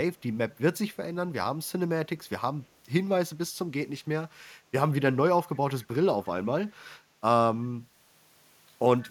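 A brief, very faint delayed copy of the speech surfaces from 5.54 to 5.59 s, trailing the original by 178 ms and sitting roughly 35 dB below it. This is an echo leak, likely from a far-end loudspeaker whose echo canceller let a scrap through.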